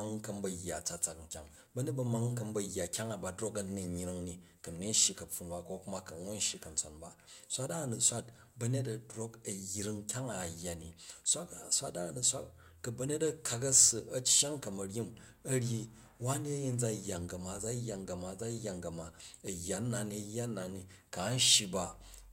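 A single sharp tick at 19.47 s interrupts this speech recording. It is a block of digital silence only 1.45 ms long, which fits a 64-sample block of zeros left when the output buffer was not filled in time. The hard cut to zero and back creates the click.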